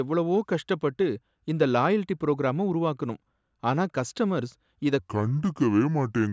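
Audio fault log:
4.99 to 6.32 s, wrong sample rate: just after "உருவாக்குனோம் ஆனா கஸ்டமர்ஸ் இத" the speech drops about 5.5 semitones and slows to 0.73x. That fits 22 kHz audio being played back at 16 kHz with no conversion.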